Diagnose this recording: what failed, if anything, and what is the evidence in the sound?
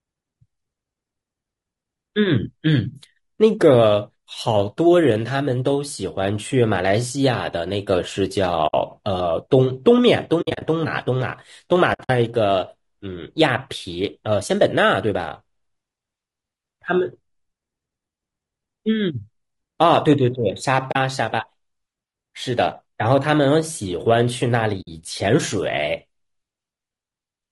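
Codec stage: the speech sounds rough and grainy throughout, with noise between harmonics. This is likely low-delay AAC compression at a low bitrate, around 32 kbps.

Network or decoder stage: AAC frame loss with muting leaves soft-edged holes at 8.67, 10.41 to 10.62, 11.93 to 12.10, 20.91 and 24.81 s. Lost frames were zeroed and faded by overlapping windows.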